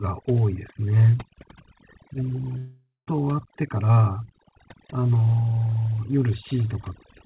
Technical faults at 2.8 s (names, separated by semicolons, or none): overdone noise removal; long network dropout